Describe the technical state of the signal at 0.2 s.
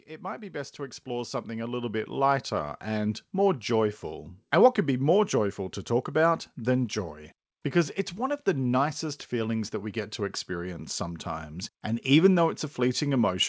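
At 0.2 s you're right inside an automatic gain rising stretch, from 0.06 to 2.9 s: the gain control hears a quiet input and keeps lifting, so voice and background swell together by about 13 dB before "more joyful". The G.722 call path behind it keeps everything below 8 kHz.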